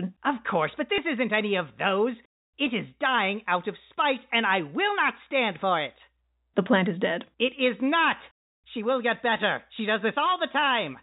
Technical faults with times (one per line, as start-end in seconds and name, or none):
0.96-0.98 packet loss with last packet repeated